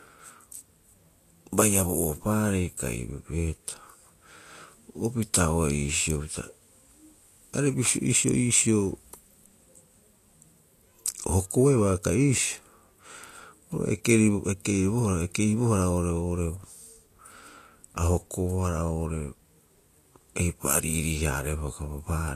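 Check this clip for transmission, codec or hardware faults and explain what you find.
The speech runs through codec damage from start to finish, and it's plainly audible: this sounds like Vorbis compression, likely at a low setting, something in the region of 37 kbps. Nothing gets through above 14.2 kHz, so the top is shaved off. Below that, the treble is quantised so coarsely that fine detail turns into noise of roughly the same energy. The result is hiss and grain across the voice, roughened tone, and consonant attacks that smear rather than snap.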